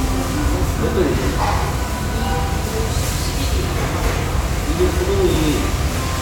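No technical faults can be heard anywhere in this audio.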